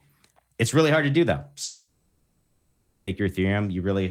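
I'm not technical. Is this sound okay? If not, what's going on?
No, not quite. Right after "hard to do though," at about 1.63 seconds, the speech cuts out and doesn't return until about 3.10 seconds. That's a long network dropout, likely from the connection stalling. For those roughly one and a half seconds, the player fills the hole with a fading smear of the last sound. When the talking resumes, whatever was said in that gap is gone for good.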